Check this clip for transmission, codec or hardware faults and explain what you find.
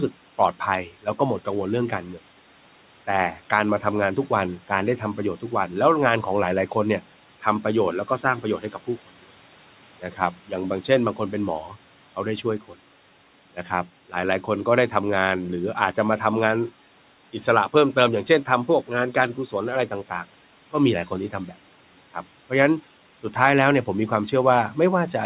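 One fault stands out, and it comes from the call's processing rather than the line or the hardware. The audio is band-limited with nothing above 4 kHz, which fits narrowband G.711 A-law telephone coding, and the room noise sits about 22 dB below the speech.

Speech cut by the noise suppressor, 10.02 to 10.19 s: the suppressor misjudged part of the speech as background and pulled it down along with the noise, by up to about 8 dB. Around a tenth of a second of sound is affected, so that brief passage comes across as swallowed and faint, as if it briefly dropped away from the microphone.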